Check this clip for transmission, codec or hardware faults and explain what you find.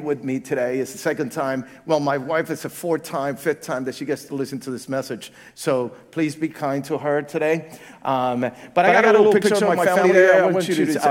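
One fault is present. From 8.86 s onward, a doubled audio track starts abruptly. An equally loud copy trails a tenth of a second behind, likely via a slower path.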